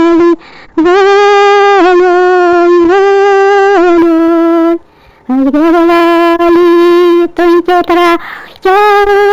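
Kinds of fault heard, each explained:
Imaging from linear upsampling: From 3.99 s, straight-line interpolation dulls the top. Faint mirror images shimmer metallically between 8 kHz and 16 kHz, roughly 40 dB down.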